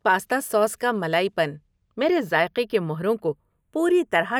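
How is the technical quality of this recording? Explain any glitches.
The recording has one fault, and it runs the whole length: the two channels are drifting apart. The left and right channels were captured by devices running on separate clocks that disagree by roughly 30 parts per million, so the time offset between them grows steadily, reaching about a tenth of a millisecond by the end. When the channels are summed to mono, that changing offset creates comb-filter notches that sweep slowly through the spectrum, and the speech takes on a slow, gradually shifting flanging colour.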